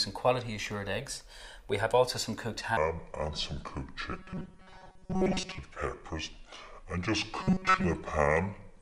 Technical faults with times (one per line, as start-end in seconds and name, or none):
2.77-8.82 section at the wrong speed
4.12-5.58 robotic sound from repeated short buffers
7.41-7.84 robotic sound from repeated short buffers